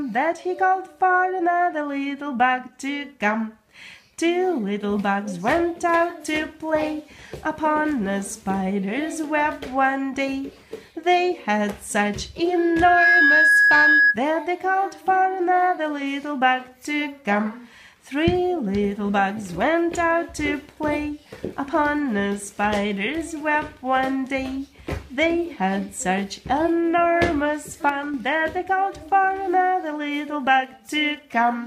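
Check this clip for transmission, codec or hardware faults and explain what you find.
Two faults stand out: a loudspeaker feedback squeal and a sudden gain jump.

From 12.53 s to 14.18 s there is loudspeaker feedback squeal, a single tone at 1.7 kHz that swells over roughly half a second until it sits around 10 dB above the rest of the sound. A microphone is picking up the loudspeaker it feeds, and at 1.7 kHz the loop gain exceeds one, so that tone keeps feeding itself. Unlike a steady test tone or interference whine, it grows from nothing, which is the signature of a runaway loop.

Between 27.89 s and 28.14 s the level drops by about 5 dB in a single step, with the background noise falling by the same amount as the foreground sound. This is a sudden gain jump, likely from a digital gain setting applied between one sample and the next with no ramp. A fade or an automatic gain control would move smoothly over time, whereas here everything shifts together and instantly.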